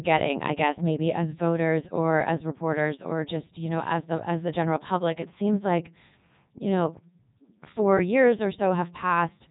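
Speech runs through the Codec 2 vocoder for the whole clip, and the damage is heavy. The decoder rebuilds the voice from sine waves driven only by pitch, voicing, energy and a spectral envelope, so the original waveform is gone and the result sounds robotic and buzzy. Nothing remains above 3.8 kHz. The level of detail fits Codec 2's highest-rate 3.2 kbit/s mode, yet the voice still sounds synthetic.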